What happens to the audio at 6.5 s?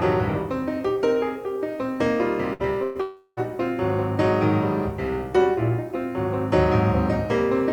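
At 6.5 s the audio carries the same low bit depth with dither heard across the whole clip: a steady, even hiss sitting roughly 40 dB below the signal. The sound was reduced to about 9 bits, with dither added before rounding, so the rounding error became uniform white noise. That hiss is what sets it apart from undithered low bit depth, which would give gritty, signal-dependent distortion that gates and crackles with the sound.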